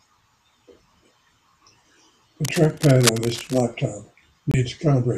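From 2.44 to 3.61 s, cable scratch noise rasps over the speech, likely a worn contact shifting; dense, irregular broadband bursts roughly 10 dB under the speech speckle the spectrogram. At 4.51 to 4.54 s, a digital broadcast dropout mutes the speech for about 24 ms, consistent with one lost frame, leaving a flat-line gap in the waveform.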